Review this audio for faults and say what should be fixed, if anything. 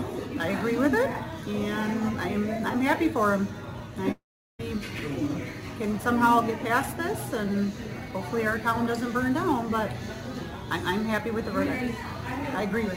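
Sample clock jitter runs through the whole clip, from start to finish. The converter's clock wanders by something like 10 microseconds, so each sample is captured a little early or late. Where the waveform moves fastest, those timing errors turn into amplitude errors, leaving a grainy hiss that sits roughly 25 dB below the signal. It thickens on loud and bright passages and drops away in quiet ones. The fix is a clean, stable clock source for the converter, or a jitter-attenuating clock recovery stage ahead of it.

Long network dropout at 4.11 to 4.61 s. About half a second of audio never arrives. The playback side smears the last sound forward as a fading buzz, which thins out into roughly 0.37 s of near silence. The sound then resumes further along, with the missing stretch gone rather than delayed. This is likely caused by a burst of lost packets that outlasted the receiver's buffering. 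Adding a deeper jitter buffer, forward error correction or retransmission on that link would prevent it.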